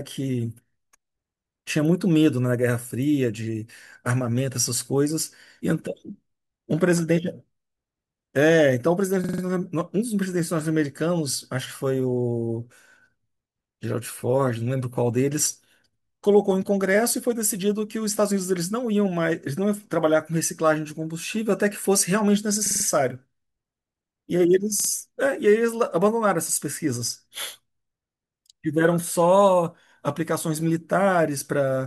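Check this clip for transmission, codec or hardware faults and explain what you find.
The playback device ran short of new audio three times and replayed its last buffer, a repeated buffer fault. Each repeated piece lasts about 46 ms, which fits a 2048-sample buffer. From 9.24 to 9.43 s and from 22.66 to 22.85 s the same fragment plays four extra times. From 24.80 to 24.89 s it plays two extra times. The speech stutters briefly, with a hard join at each repeat, and then carries on without any audio missing.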